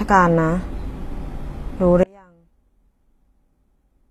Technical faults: HE-AAC compression; audio dropout to a faint residue

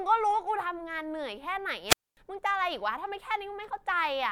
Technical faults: dropped samples; wireless microphone squelch dropout

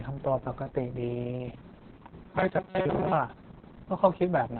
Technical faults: Opus voice compression

